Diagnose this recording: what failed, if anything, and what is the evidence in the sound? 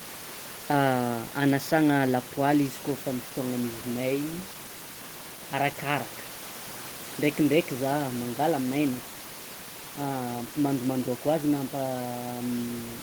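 Nothing failed in this recording; the only thing in the sound besides the speech is the room's own background noise, sitting about 18 dB below it.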